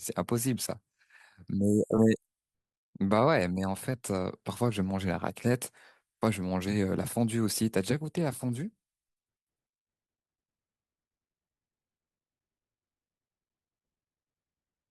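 At about 1.97 to 2.00 s there's a spot where compressed frames were skipped: the speech jumps ahead by roughly 70 ms, which fits a few 20 ms frames going missing or being rejected by the decoder.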